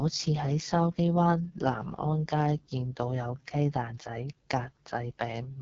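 AMR wideband (HD Voice) codec throughout: the rough, raspy speech points to the lowest AMR-WB rate, near 6.6 kbit/s, with noise-filled highs and nothing above 7.6 kHz.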